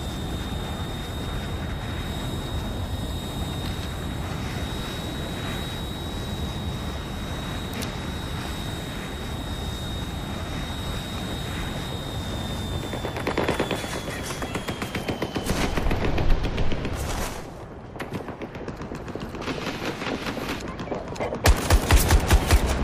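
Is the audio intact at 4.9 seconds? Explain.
Yes, the audio is intact at 4.9 seconds, with no fault to be heard at that point.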